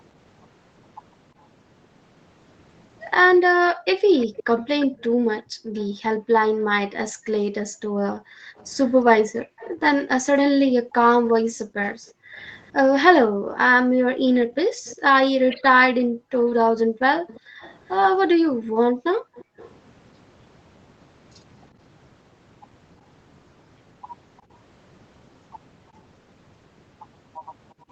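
From 3.51 s to 19.57 s the room background keeps sinking and returning, dropping by as much as about 40 dB, for roughly ten seconds in total. This is background gated by the echo canceller: each time the far-end loudspeaker plays, the canceller pulls the microphone down hard, taking the ambient sound with it, then releases it once playback stops.

A faint delayed copy of the speech trails 350 ms behind at 4.18 to 5.86 s, at about 15 dB below the speech, then more quietly, about 25 dB down, at 8.57 to 9.72 s, 14.85 to 14.96 s, 17.27 to 17.91 s and 19.35 to 19.7 s, and last at about 40 dB down from 24.37 to 24.54 s. This is echo leak, likely from a loudspeaker side whose canceller let some of its own playback back through the microphone.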